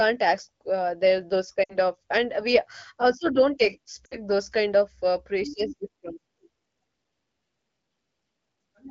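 Lost AMR speech frames at 1.64–1.77 s, after "ask uh the those", and 4.06–4.16 s, before "those kind of uh". Each time, about 60 ms of speech, which fits three 20 ms frames, is concealed with a brief smeared, fading dip before speech resumes.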